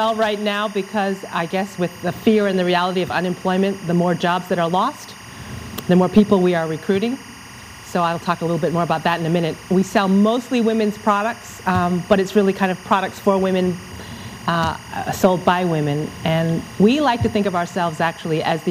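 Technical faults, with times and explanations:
Throughout, timecode bleed: a steady chirping warble sits roughly 20 dB under the sound for the whole clip. Linear timecode from a neighbouring track or cable is leaking into the audio path. That code is a square wave whose pitch flips between around 1 kHz and around 2 kHz as it spells out each frame's bits. Because the frames run at 24 per second, the flipping repeats in a tight, regular rhythm, producing the constant electronic twitter.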